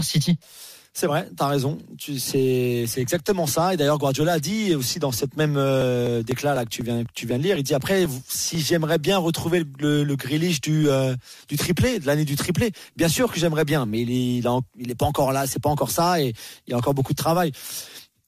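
From 5.8 s to 8.55 s there are periodic USB or driver dropouts. Every 0.249 s, a background interruption of the bus or audio driver causes about a millisecond of audio to be skipped outright, around ten times in all. Each skip joins two mismatched points of the waveform, producing a regular tick. On a waveform these appear as abrupt steps in the signal. A spectrogram shows thin, evenly spaced vertical broadband lines.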